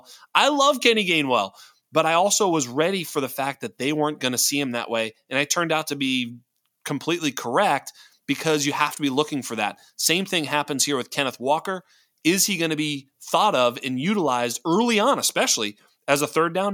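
No technical faults are audible anywhere in the speech.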